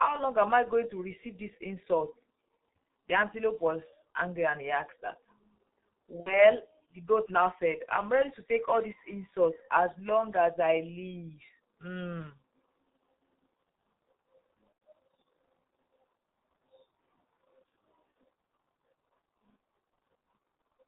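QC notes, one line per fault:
Throughout: G.723.1 codec. The speech has been squeezed through the low-rate internet-telephony coder at about 6.3 kbit/s, and the damage is heavy. Nothing survives above 4 kHz, so the sound is dull and muffled, and the coarse 30 ms framing with a slowly updated voice model makes the tone hoarse and smears consonants together. Fast changes in the speech arrive late or blurred.
6.20 to 6.45 s and 14.72 to 14.81 s: VoIP packet loss concealed by the speech codec. About 60 ms goes missing in the first gap, which fits two lost 30 ms frames, and about 90 ms in the second, which fits three. The decoder fills each hole by repeating its last pitch and filter at falling gain, so the speech turns into a fading buzzy or noisy smear. At 6.20 s the weakened, distorted sound lasts well beyond the lost stretch, until about 6.45 s, as each rebuilt frame carries the previous error forward.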